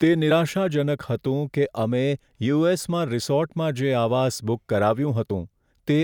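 At 0.30 s and 5.29 s, compressed frames are skipped: the speech jumps ahead by roughly 50 ms and 20 ms, fitting whole 24 ms frames lost.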